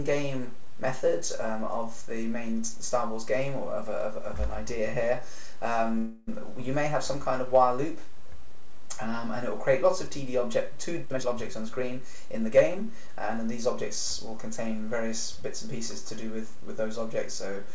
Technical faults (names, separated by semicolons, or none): call audio freeze; jitter buffer speed-up